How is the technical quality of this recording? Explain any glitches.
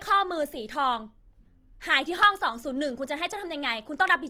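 The quality is limited by plainly audible Opus compression running through the whole speech clip. The voice sounds grainy and rough, with a noisy, hissy texture in place of clean harmonics, yet the bandwidth stays full. That points to music-mode (CELT) coding at a low rate, likely around 24 kbps, where starved bands are filled with folded or noise content. On a spectrogram, harmonic lines blur into speckled, noise-like energy across the upper bands, without clean gaps.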